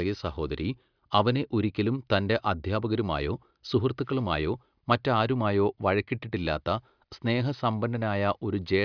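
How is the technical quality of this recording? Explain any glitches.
Nothing stood out as a technical problem on listening to this speech recording, so there are no glitches to explain.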